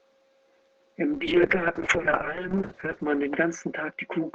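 At 1.14 s the call's bandwidth estimate falls and the encoder is pushed from what sounds like about 40 kbps down to about 6 kbps. This call bitrate drop narrows the audio from 20 kHz to 8 kHz, so the speech turns muffled and rough. It stays at its worst for 1.43 s and remains degraded through the end of the clip.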